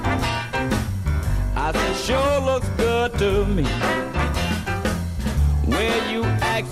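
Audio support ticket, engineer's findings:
Listened through at normal level and on headphones; nothing stood out that would point to a problem in the audio chain.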